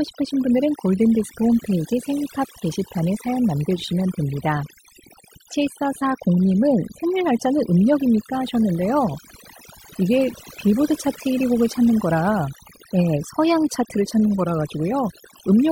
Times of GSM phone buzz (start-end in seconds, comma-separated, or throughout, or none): none